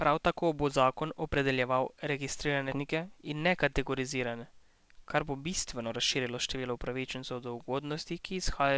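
At 2.72 to 2.74 s the speech jumps abruptly forward with no gap, losing roughly 0.4 s. This skip ahead happened because that stretch was dropped while later audio was already queued. From 4.59 to 6.64 s the talking sounds hurried but keeps its pitch, running about 7% fast. This is a jitter buffer speed-up, which trimmed roughly 150 ms of pitch periods to shed excess delay.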